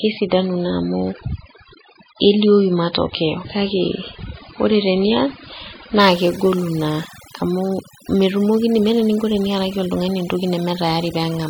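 From 0.0 s to 6.0 s the speech shows an adaptive stream starting at a low bitrate. The player began on a cheap version of the stream to start fast, and nothing above 5 kHz survives, so the speech is dull and muffled and has smeary, warbling codec artefacts. The sound points to an MP3 of about 16 kbit/s. At 6.0 s, just before "kegolu naa amu metumokini", quality jumps with no gap, which fits a step up to around 128 kbit/s. On a spectrogram, energy stops flat at 5 kHz and then suddenly fills the upper bands.

Throughout the clip there is overdone noise removal. The noise reducer was set far too aggressively, so any frequency band that falls near its noise estimate is pushed down or shut off entirely, and quieter parts of the speech are cut away along with the noise. Pauses drop to near silence dotted with twinkling, chirpy specks. A spectrogram shows a dark background scattered with isolated bright dots and harmonics full of holes. 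The waveform's quiet stretches sit almost at zero.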